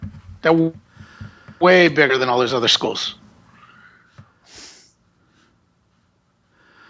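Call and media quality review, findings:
Automatic gain rising, 1.59 to 2.89 s. Speech and background noise swell together by about 6 dB over 1.3 s. Component: the call's automatic gain control. It judged the input too quiet. It raised gain gradually rather than in one step. Both voice and room noise get louder at the same rate. Call microphone processing is also audible. Nothing comes through above 8 kHz. The lowest bass is trimmed by its high-pass filter, as expected.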